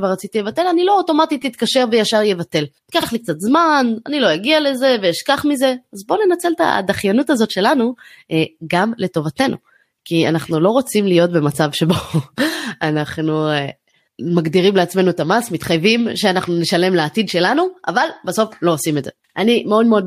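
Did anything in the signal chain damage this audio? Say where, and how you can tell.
Yes, there are repeated frames at the codec or storage stage. Speech stutters at 1.42 s, where a tiny 5.8 ms slice plays two extra times, then at 3.02 to 3.06 s, where a 46.4 ms chunk plays once more, and again at 19.28 to 19.33 s, where about 49 ms comes back once. Each jump back sounds like a short run of compressed frames being written or sent more than once, so the decoder replays the same sliver, and the clip runs longer by that much.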